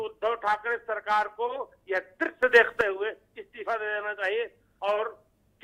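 At 2.43 s a sudden gain jump lifts the sound and its background noise together by about 10 dB until 2.81 s, likely from a gain change applied without a ramp. The waveform shows an abrupt step in amplitude, and the spectrogram brightens across all frequencies at once.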